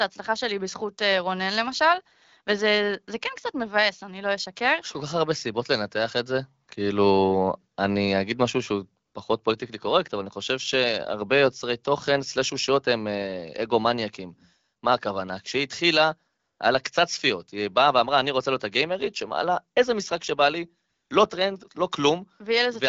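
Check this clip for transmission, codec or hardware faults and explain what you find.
The clip shows one fault, AMR comfort noise, in four short pauses. The wideband (HD Voice) coding, whose light smoothing fits AMR-WB at 12.65 kbit/s, is not itself a fault.

AMR comfort noise at 6.65–6.67 s, 9.05–9.13 s, 16.39–16.59 s and 20.89–21.09 s: speech frames stopped, so the receiver synthesised a steady, smooth hiss. A spectrogram shows uniform flat patches with abrupt edges, and the waveform shows a constant low envelope.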